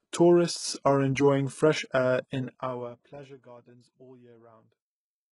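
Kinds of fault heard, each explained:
HE-AAC compression, throughout: The heavy codec damage and the empty band above 11.1 kHz point to likely HE-AAC at about 12 kbps, where the treble is rebuilt by copying lower bands upward, so harmonics misalign and s sounds turn gritty or metallic.
Zipper noise, 2.42 to 3.44 s: Between "are enjoying fresh air" and "all year" the level falls roughly 25 dB in unsmoothed 2 dB steps, about ten per second, and each jump adds a small click, giving a ticking zip over the sound.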